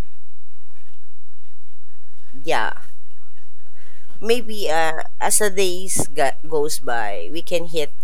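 A DC offset runs for the full length of the speech recording. The entire waveform sits displaced from the zero line by a constant of about -12 dBFS, a fixed shift rather than anything that changes with the signal. The offset itself is inaudible, but it eats a sizeable share of headroom on one side of the waveform, bringing clipping closer. On a spectrum it appears as a steady component pinned at the very bottom frequency bin.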